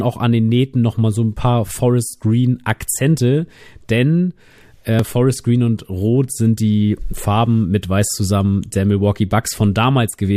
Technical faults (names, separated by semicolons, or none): overlap between stream segments